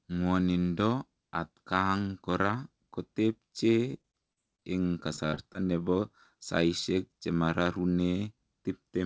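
Repeated packet loss hits the speech from 3.92 to 4.65 s and again from 5.16 to 5.56 s. Gaps of up to about 40 ms are patched by stretching the previous sound, so it turns choppy and robotic, with nothing above 8 kHz across the call path.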